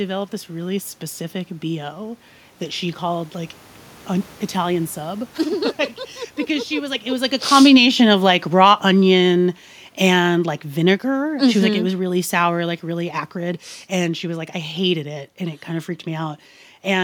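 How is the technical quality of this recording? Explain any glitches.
The recording has one glitch: automatic gain falling, from 4.1 s, after "that she called like", to 12.73 s, just before "really acrid". The gain control judged the input too loud or its background noise too strong and lowered its gain by about 13 dB, so the speech sinks steadily. Unlike a talker moving, as happens near 7 s, the room noise sinks with the voice.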